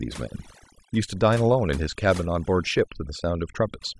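From the first moment to the last, this speech has overdone noise removal. The noise reducer was pushed too hard, so any frequency band sitting close to its idea of the noise floor got pulled way down or switched off entirely, and the softer parts of the voice went along with it. You hear it as a near-silent background sprinkled with twinkly little specks.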